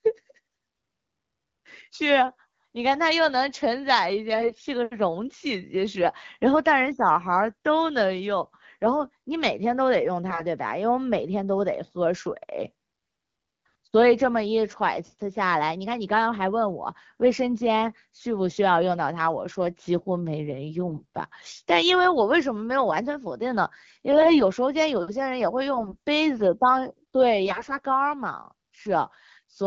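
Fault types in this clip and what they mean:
AMR bit errors: Flipped bits in the weakly protected parts of AMR frames misplace the excitation pulses and skew the finer pitch, gain and spectral values, so the speech turns hoarse and gargly at 4.32–4.64, 10.30–10.43, 20.88–21.16, 24.12–24.40, 25.74–25.97 and 27.46–27.77 s. Pitch and level stay roughly intact, and the sound never drops out or repeats as it would with lost frames. Around the bursts, the wideband codec sounds clear.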